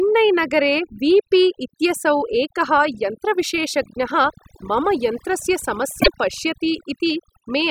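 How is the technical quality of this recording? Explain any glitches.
The recording has two faults: heavy-handed noise reduction across the whole clip and one brief decoding glitch near the end.

Overdone noise removal, throughout: the noise reduction pulls individual frequency bands down whenever they resemble noise, so the background sinks to twinkling near-silence and quiet parts of the speech are pulled down with it.

Damaged data in a compressed stream, 6.00 to 6.08 s: corrupted bytes make the decoder misread frames and resynchronise on the next header, producing a short chirp, squawk, click or hole.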